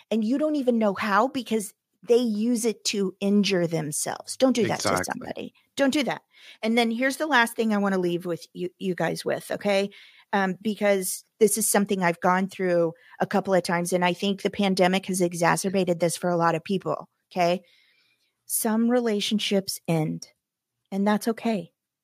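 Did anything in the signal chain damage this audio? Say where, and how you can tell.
No, nothing I can hear in this speech points to damage at any stage of the chain.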